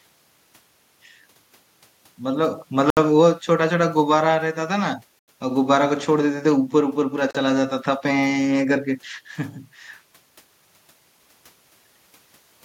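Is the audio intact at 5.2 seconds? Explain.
No. At 5.19 s the speech drops out completely and returns at 5.28 s, a gap of about 89 ms. This is a Bluetooth stall. The sound stops dead rather than fading. Then it resumes abruptly. The likely cause is radio interference holding up packets on the wireless link. The headphones' buffer then ran empty, so playback halted until the delayed packets were resent and arrived.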